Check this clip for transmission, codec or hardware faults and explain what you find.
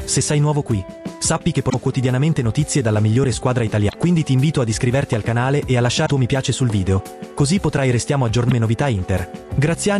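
The clip has damaged data in a compressed stream, heard four times: 1.66–1.74, 3.85–3.95, 6.02–6.10 and 8.45–8.52 s. Each lasts under 0.1 s. Corrupted bytes make the decoder misread frames and lose sync until it finds the next header. Each event is a brief chirp, squawk, click or short hole.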